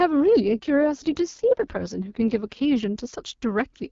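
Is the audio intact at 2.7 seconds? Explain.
No, not quite. At 2.7 s you're in the middle of an AMR rate drop that runs from about 0.44 s to 3.14 s. The network has pushed the wideband codec down a gear, which sounds like a step from the clear 12.65 kbit/s HD Voice mode to something near 6.6 kbit/s, with more of the bits going to error protection. There's no gap and the bandwidth holds, but the speech turns rough, raspy and synthetic until the rate climbs back.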